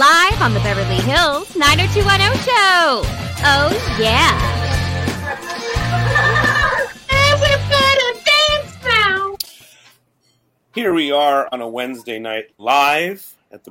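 Hard clipping flattens the loudest peaks in five stretches: 0.02 to 2.92 s (overdriven by about 8 dB), 3.45 to 4.31 s (about 7 dB), 7.12 to 8.54 s (about 5 dB), 8.90 to 9.05 s (about 3 dB) and 12.70 to 12.98 s (about 6 dB). The level exceeds what a stage can pass, so crests are sliced off, giving crackle on the peaks. The waveform shows squared-off tops at a fixed ceiling, and the spectrogram shows broadband harmonic smearing reaching high into the kHz range.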